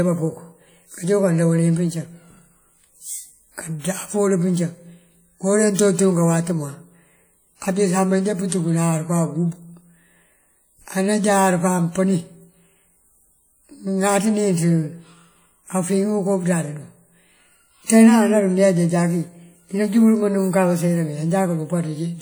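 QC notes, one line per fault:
throughout, WMA compression: washy ringing and a hiss breathing with the speech, likely a roughly 48 kbps encode smearing noise over long blocks.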